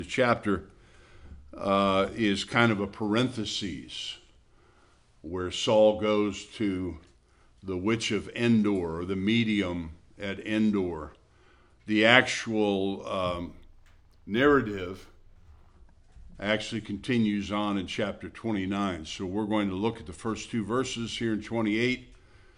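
From 13.38 to 15.70 s the top end dulls and a faint metallic shimmer rides over the high frequencies. This is imaging from linear upsampling. Straight-line interpolation, which fits a rise from about 22 kHz to 48 kHz, filters weakly, leaving a mirrored spectrum copy between 11.03 and 22.05 kHz, roughly 45 dB down.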